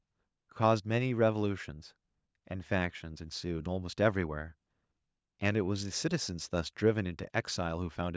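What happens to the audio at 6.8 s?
Nothing goes wrong at 6.8 s: the speech there is intact, carrying only the ordinary character of call microphone processing, with its usual bass trim and nothing above 8 kHz.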